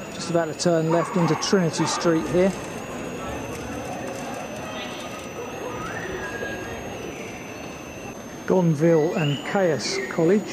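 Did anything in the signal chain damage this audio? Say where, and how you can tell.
Yes: a switching supply whistle in the analogue power stage runs throughout, a high tone near 7 kHz, drifting between 6.0 and 7.05 kHz, about 25 dB below the signal, visible as a thin wandering spectrogram line.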